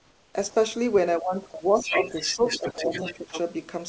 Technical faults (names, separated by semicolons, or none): comfort noise in place of the background; sound dropped by the voice detector; other side's voice leaking through; speech suppressed in double talk